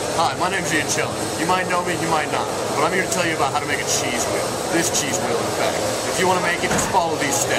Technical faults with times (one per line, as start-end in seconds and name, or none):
none